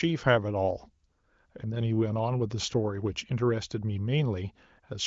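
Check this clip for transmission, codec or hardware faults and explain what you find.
No faults can be heard anywhere in this audio.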